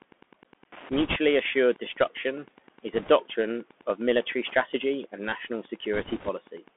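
Wi-Fi interference runs through the whole clip: a steady tick about ten times a second, every 102.4 ms, roughly 25 dB below the speech. A nearby Wi-Fi radio's beacon bursts are being rectified by the audio circuit and leak in as clicks.

The Bluetooth CVSD headset codec also colours the entire recording. The speech is confined to a 200 Hz to 3.4 kHz band, which fits a 64 kbit/s CVSD headset link. Because its one-bit, adaptive-step coding lags behind fast or loud high content, s sounds turn scratchy and a granular hiss lies under the speech.

Bit errors on a Bluetooth voice link strike three times: 0.92 to 1.16 s, 2.93 to 3.10 s and 5.93 to 6.29 s. Flipped bits in the CVSD stream add a rushing crackle rather than loud clicks. It is roughest in the first burst, where the error rate is a few percent.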